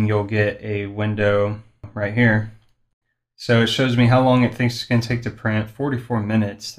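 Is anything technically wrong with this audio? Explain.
Yes, there is one fault: damaged data in a compressed stream, at about 1.84 s. A stretch of the encoded data there is corrupt, so the decoder misreads or rejects the affected frame, loses sync and hunts for the next valid frame header. The result is a brief chirp, squawk, click or short hole.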